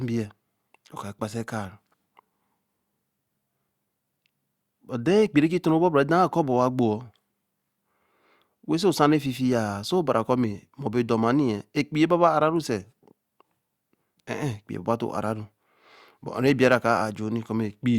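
No faults detected anywhere in the speech recording.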